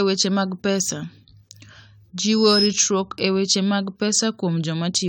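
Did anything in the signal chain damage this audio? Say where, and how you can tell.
Yes. The codec stage likely re-encoded this speech about seven times, consistent with 96 kbit/s AAC. The generation loss sounds swirly and hollow throughout, with blurred attacks and nothing above 19.3 kHz.

A microphone picked up its own loudspeaker, and the loop gain exceeded one. This loudspeaker feedback squeal is a 5.1 kHz tone from 2.24 to 2.77 s, swelling over about a third of a second to roughly 5 dB above the speech.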